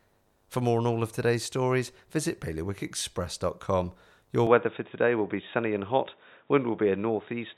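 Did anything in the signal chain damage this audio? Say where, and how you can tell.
Yes. An input switched to a poorer device at 4.47 s and lasted to the end: with no gap and no level jump, the speech suddenly loses everything above 3.8 kHz and gains a faint new noise floor about 45 dB down. This likely points to capture moving to a narrower-band microphone.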